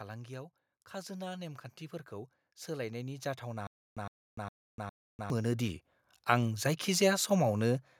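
From 0.91 s to 6.58 s there's an automatic gain rise: the AGC decided the input was too quiet and wound its gain up by about 17 dB, so the talker and the background noise swell together slowly rather than jumping.

Partway through that, between 3.67 s and 5.30 s, you get a stutter with silent gaps. A 111 ms burst of speech plays four times, each followed by about 297 ms of dead digital silence, a steady 408 ms cycle. It's most likely a stalled player or stream replaying its last fragment on each retry, and the audio meant for that stretch is simply gone.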